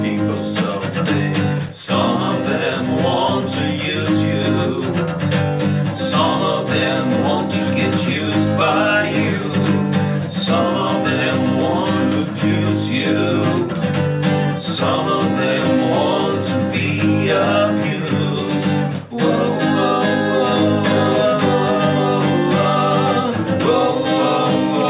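No technical faults are audible anywhere in this audio.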